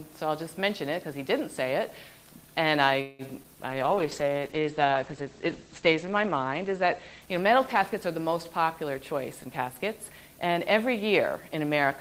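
At 3.01 s the audio stalls. The last sound is drawn out as a fading buzz or hiss for about 176 ms until 3.22 s, after which playback picks up where it stopped. This call audio freeze was likely caused by packets held up in transit, leaving the jitter buffer empty, so a gap was inserted with nothing lost.

At 3.43 s, playback jumps forward. Roughly 70 ms of audio disappears, and the two sides are joined by only a tiny 8 ms bridge. This skip ahead happened because a stretch was dropped while later audio was already queued.

From 3.72 s to 9.13 s the sound turns rough and muffled. It loses its top end as the bandwidth falls from 20 kHz to 8 kHz, and it is at its coarsest for about 2.3 s. This call bitrate drop followed a fall in the bandwidth estimate, which pushed the encoder from 32 kbps down to 11 kbps.

Between 3.75 s and 4.41 s the audio drags at 92% speed with unchanged pitch, stretching sounds. 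In this jitter buffer slow-down, the receiver repeated pitch periods or pause fragments, adding 59 ms to rebuild its reserve.

From 9.11 s to 11.42 s the audio hurries along at 107% speed, again at the same pitch. This jitter buffer speed-up came from the receiver trimming short pitch-period pieces, about a fifth of a second in total, to shed excess buffered delay.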